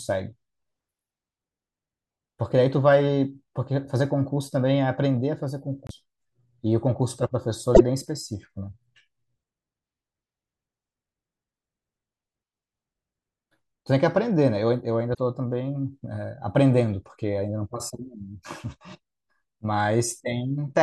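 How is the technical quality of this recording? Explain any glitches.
The speech has three short glitches. At 5.87 to 5.91 s, 7.74 to 7.81 s and 15.13 to 15.18 s, the sound skips ahead. This is likely a broken MP3 bit reservoir: frames were lost, and the next ones read borrowed bytes from the wrong frame. Unlike a plain dropout, the speech jumps forward rather than pausing, and each glitch fits roughly two or three 24 ms frames.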